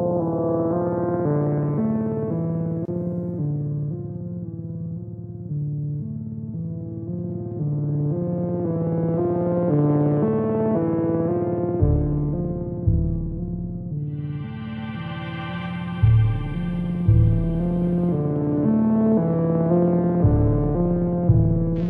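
At 2.85 s the sound cuts out for 27 ms, a brief hole with smeared edges, then picks up exactly where it stopped. This gap at a join of encoded pieces comes from untrimmed splicing, leaving encoder start delay and final-frame padding in place.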